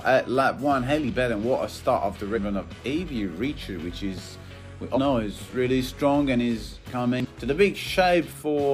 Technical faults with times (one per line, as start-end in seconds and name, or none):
2.33-2.39 damaged data in a compressed stream
4.93-4.98 damaged data in a compressed stream
7.20-7.26 damaged data in a compressed stream